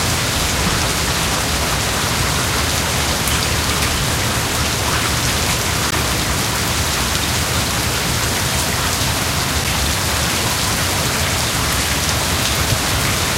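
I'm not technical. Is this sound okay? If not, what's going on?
No. At 5.91 s there is a block of digital silence: for about 16 milliseconds the audio drops to complete nothing and then returns. It cuts out and back with no fade, so the edges are abrupt.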